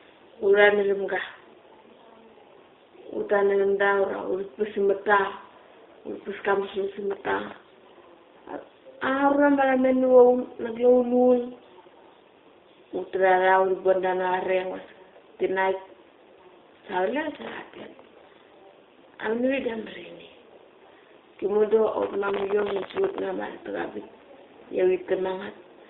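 Throughout, the speech carries the sound of the G.729 codec at 8 kbit/s. The vocal tract filter, pitch predictor and sparse pulses rebuild each 10 ms frame, leaving a slightly rough, synthetic quality. On a spectrogram, energy sits inside a band from 300 Hz to 3.7 kHz, with nothing above it.

From 17.35 to 18.46 s, and again from 22.02 to 23.19 s, processor overload crackle tears across the sound. The processor keeps missing deadlines on very short buffers, under a millisecond each, dozens of times in a row, and each miss replays a sliver of old audio with hard edges. The result is a gritty, sputtering crackle. The waveform shows many tiny discontinuities, and the spectrogram shows dense vertical streaks of broadband energy across both spans.

Inside the second burst, from 22.95 to 22.97 s, there is VoIP packet loss concealed by the speech codec. This fits a single lost 10 ms frame. The decoder extrapolates from its last pitch and filter, so the sound is briefly stretched and fades. 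The spectrogram shows smeared, repeated harmonics in place of normal detail.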